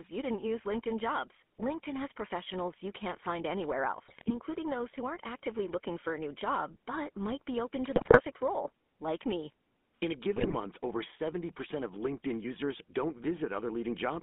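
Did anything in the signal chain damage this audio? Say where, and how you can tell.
Yes. At the codec stage, a GSM full-rate codec at 13 kbps gives buzzy, gravelly roughness throughout. A spectrogram shows a hard band from 200 Hz to 3.5 kHz, with nothing outside it.

GSM bit errors over the radio link cause squawks and gargling at 4.08–4.31 s, after "you can't find anywhere", at 7.96–8.21 s, after "might be open to", and at 10.36–10.55 s. These show as level spikes and smeared, distorted frames.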